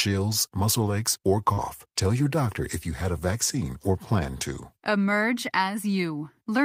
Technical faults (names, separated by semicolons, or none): short concealed packet loss; lost packet rebuilt from error correction